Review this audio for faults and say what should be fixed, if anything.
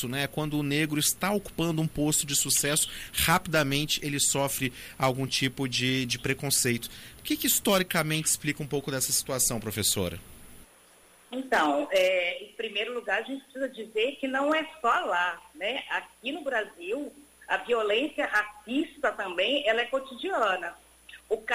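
No faults found; nothing needs fixing.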